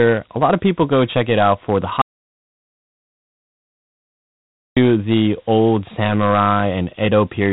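From start to finish the speech carries Dialogic VOX ADPCM damage: 4-bit adaptive differential coding that stores only a coarse step between samples, so a gritty hiss rides along with every syllable and fades in the gaps. Nothing sounds above about 3.9 kHz, which fits 8,000 samples a second at roughly 32 kbps. The grain here tracks the speech level, because the adaptive step size follows the signal.

At 2.01 s the sound stops dead, and it resumes at 4.77 s, about 2.75 s later. This is an audio dropout to silence, likely from the input being lost while recording continued and wrote silence. The gap is silent with no room tone, which sets it apart from a noise gate or a speaker's pause. Whatever was said during it is gone, not masked.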